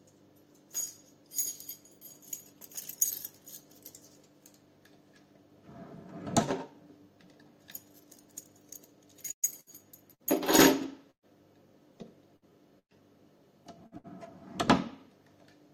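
From 9.31 to 11.25 s and again from 12.36 to 14.07 s, repeated packet loss (robotic sound) occurs: short runs of audio went missing, each patched by extending preceding sound. Gaps up to about 0.12 s leave the audio choppy.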